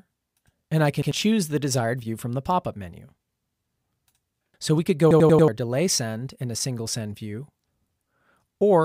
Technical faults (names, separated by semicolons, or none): repeated buffer